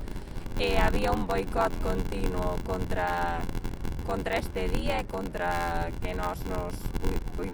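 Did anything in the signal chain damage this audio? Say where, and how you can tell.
Yes. Block size mismatch (padded) at the buffer stage: a constant 86.1 Hz buzz and 0.861 speed at normal pitch, from zero-filled short blocks, fitting 512-sample reads.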